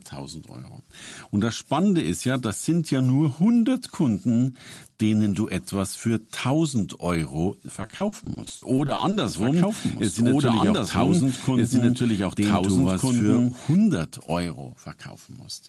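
From 7.81 to 9.14 s, repeated packet loss leaves choppy, robotic sound. Fourteen gaps, the longest 60 ms, are patched by stretching earlier sound, showing as repeated smeared spectrogram blocks.

From 9.27 to 13.76 s, a doubled audio track adds a same-level copy roughly 1.5 s behind, likely a second capture or an out-of-step edit. Waveform shapes repeat, starting and stopping abruptly.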